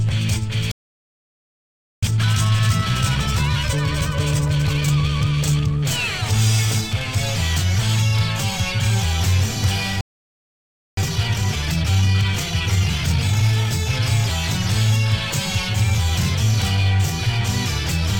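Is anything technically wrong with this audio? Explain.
Yes. The audio has two playback stalls, each followed by a time-compressed catch-up.

The first playback stall runs from 0.72 to 2.03 s, about 1.3 s of silence. The second runs from 10.01 to 10.97 s, just under 1 s. Both times the sound cuts off mid-flow and the output goes dead. The likely cause is the player running short of data, or its thread being blocked. It then resumes once it recovers.

Time-compressed catch-up follows each stall. It runs from 2.03 to 5.03 s and from 10.97 to 13.97 s. The player trims its backlog by dropping small slices and cross-fading the joins. Here that plays the audio at 1.25 times normal speed for 3 s each time. Pitch stays put, but the sound is noticeably hurried.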